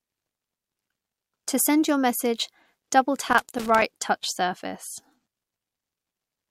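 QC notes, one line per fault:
0.33–1.29 s, loose connector crackle: a worn contact makes and breaks as it shifts, chopping the speech into an irregular burst of scratchy crackle.
3.29–3.82 s, loose connector crackle: the same unstable contact briefly breaks again, cutting the signal on and off and producing a shorter, ragged burst of crackling.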